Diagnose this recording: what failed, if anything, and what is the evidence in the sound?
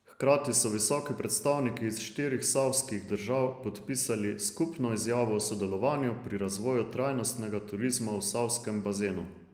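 Network stage: one packet was lost at 0.75 to 0.77 s, just before "predstavniki iz štirih savskih", and rebuilt from error correction. The next packet carried a low-bitrate copy, so there is no gap, but those 20 ms sound rougher and noisier than the surrounding speech.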